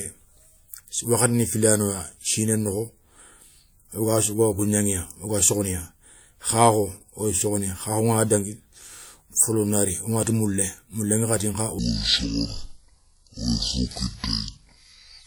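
From 11.79 s to the end, the speech plays as a section at the wrong speed. It runs at 0.56 times its recorded speed. Pitch falls about ten semitones with it. Everything turns deep and slow. A player or editor on the wrong clock is the likely cause.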